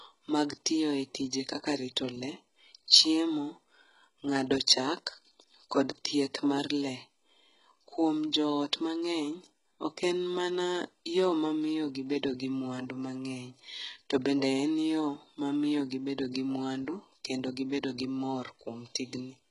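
Throughout the speech, the treble sounds synthesised: sibilants are gritty and metallic, likely from heavy HE-AAC compression at a very low bitrate. A spectrogram shows repeated, blocky upper bands ending near 13.7 kHz.

Pre-echo appears at 2.88–2.90 s and again at 4.67 s, where codec noise smears ahead of sharp attacks as brief hiss. The waveform shows faint noise just before each transient.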